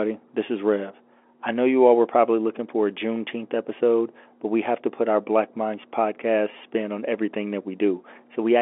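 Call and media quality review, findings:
No faults found: the speech sits in the narrow telephone band of a G.711 mu-law line at 64 kbps, roughly 250 Hz to 3.5 kHz with nothing above 3.8 kHz.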